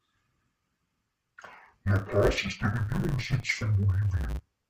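From start to finish the speech carries an interleaved-as-planar fault: 10 ms blocks of alternating channel samples are split into halves and played at half speed, giving a dull, robotic tone with a 100 Hz buzz. Unlike a pitch shift, there is no clear octave drop.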